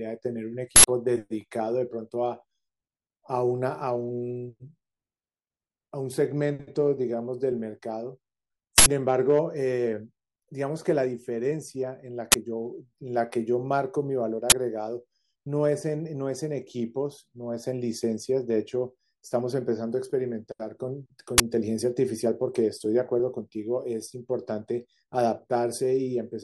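An uninitialised buffer was sent to the output before any speech had been written into it, so leftover memory played as samples. It produces short, loud bursts of digital noise in 80 ms blocks at 0.76–0.84 s and 8.78–8.86 s, and 20 ms blocks at 12.32–12.34 s, 14.50–14.52 s and 21.38–21.40 s.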